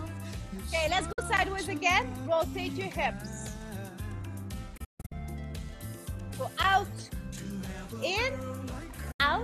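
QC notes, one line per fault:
1.12–1.19 s, 4.77–5.12 s, 9.11–9.20 s: digital broadcast dropout. The receiver lost frames and muted with a quick 8 ms fade. The middle event breaks into several short holes, the longest 144 ms.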